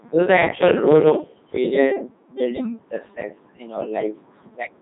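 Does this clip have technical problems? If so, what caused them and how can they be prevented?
Yes. Throughout the speech, the audio has passed through the Codec 2 vocoder. The encoder discarded the waveform and kept only pitch, voicing, energy and a coarse spectral envelope, and the decoder rebuilt the voice from summed sine waves. The result is heavily damaged: speech sounds robotic and buzzy, with nothing above 3.8 kHz. The quality fits Codec 2's highest 3.2 kbit/s mode. To prevent this, carry the audio over a waveform codec such as Opus at a higher bitrate rather than a low-rate vocoder.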